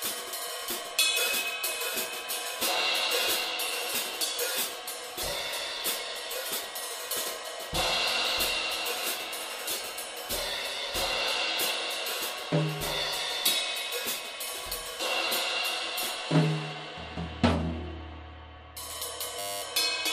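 At 19.39 s the sound abruptly turns into a steady buzz at 100 Hz that holds until 19.62 s. This is a system hang loop. The computer or audio driver stalled, but the sound hardware kept playing the same 10 ms stretch of its ring buffer over and over, about two dozen times. The short loop is why it sounds like a buzz rather than a stutter. Roughly a fifth of a second of real audio is lost beneath it.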